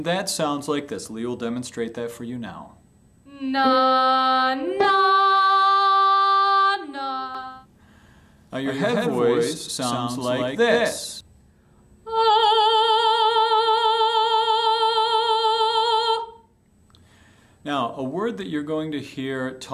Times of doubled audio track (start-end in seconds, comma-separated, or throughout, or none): 7.35-11.21